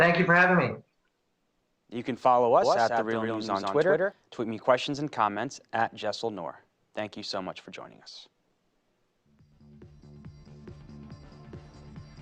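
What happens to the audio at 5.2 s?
Nothing goes wrong at 5.2 s; the audio runs through that moment intact, with no dropout, click or other disturbance.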